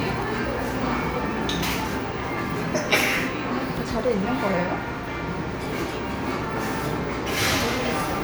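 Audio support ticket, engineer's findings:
No faults heard in this audio.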